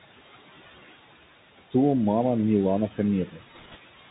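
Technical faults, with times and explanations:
Throughout, noise suppressor artifacts: the room noise sinks in the gaps, by about 16 dB, and swells back under each phrase. A suppressor is turning down bands it judges to be steady noise, frame by frame.
Throughout, Bluetooth CVSD headset codec: plainly audible damage, with a granular hiss beneath the speech, scratchy s sounds and nothing above 4 kHz. The one-bit up-or-down coding, which fits a 64 kbps CVSD headset link, cannot follow fast loud highs.
3.28–3.42 s, speech cut by the noise suppressor: for about a tenth of a second the speech turns faint and swallowed, dipping by up to about 11 dB. The suppressor mistook part of the speech for background and lowered it with the noise.
3.54–3.77 s, bit errors on a Bluetooth voice link: a rushing crackle rides over the speech without loud clicks. Flipped bits on the CVSD link each nudge the signal in proportion to the speech level and fade away, and the density points to a bit error rate of one or two percent.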